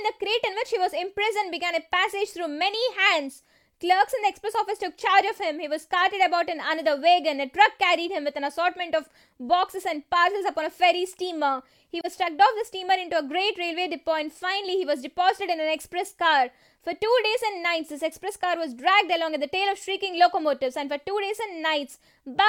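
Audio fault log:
12.00–12.05 s, AAC frame loss with muting. A 43 ms brief dip fits one lost frame. Its spectrum was zeroed, so overlapping windows fade out and back in.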